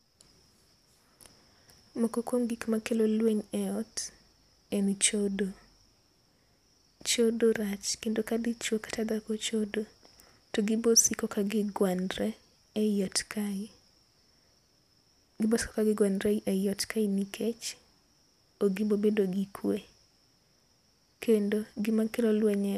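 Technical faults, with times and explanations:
No technical faults can be heard anywhere in this speech recording. There is nothing here that calls for a time or an explanation.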